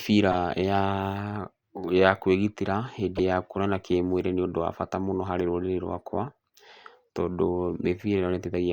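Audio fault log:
0.32–0.34 s and 3.15–3.20 s, corrupt frame decoded: the decoder played a couple of damaged frames each time, misread gains scattering energy across wrong frequencies, so the speech gives a brief chirp-like burst peaking near -15 dBFS, then a louder one near -10 dBFS between "ya kwĩgitĩra" and "ya kuonana kĩmwĩrĩ nĩ".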